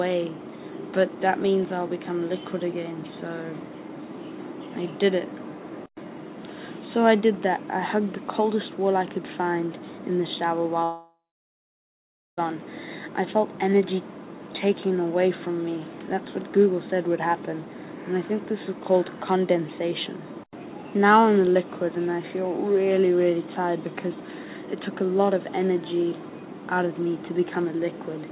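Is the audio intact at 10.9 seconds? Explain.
No. From 10.84 to 12.39 s there is most likely a long network dropout. The last sound is drawn out into a fading buzz, then about 1.2 s of near-silence follows, and the sound resumes with about 1.5 s missing. A brief packet-loss glitch would be masked within milliseconds, with nothing skipped.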